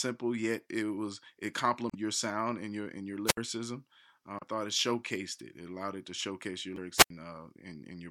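Right after "yet it was it", from 1.87 to 1.95 s, there's a short glitch from damaged data in the compressed stream. A stretch of the file is corrupted, so the decoder chokes on those frames, loses sync and hunts for the next valid header before picking up again at "your sound and your". Then at 3.26 to 3.37 s comes the first wireless microphone squelch dropout: the analogue FM link fades, hiss swells briefly, and the receiver's squelch mutes the output for about 65 ms before the voice returns.

Two more corrupted-stream blips follow. One runs from 4.39 to 4.43 s, just before "thought it showcased it", and the other from 6.74 to 6.78 s. Both are the same decoder stumble over bad frames, shorter than the first. Finally, after "it to showcase your", a second squelch dropout runs from 6.97 to 7.10 s, with the rush of hiss and then a hole of about 81 ms as the signal drops under the squelch threshold.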